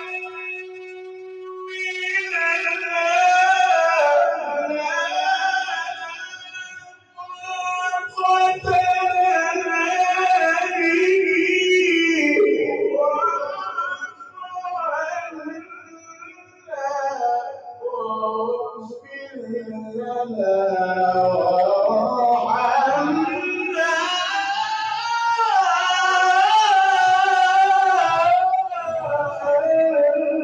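A speech-style noise suppressor is clearly sitting on this sound, treating held tones, ambience and tails as noise, so the level keeps swinging by roughly 15 dB and the whole thing pumps and thins as attacks get through while sustained parts sag. You can hear the suppressor cutting the sound down at 0.0 to 2.9 s (down about 20 dB), 4.37 to 4.82 s (about 9 dB), 5.88 to 8.67 s (about 20 dB), 13.95 to 16.74 s (about 19 dB), 17.49 to 17.84 s (about 10 dB), 18.71 to 19.94 s (about 13 dB) and 28.61 to 29.47 s (about 16 dB), each time pulling the steadier material down more than the rest.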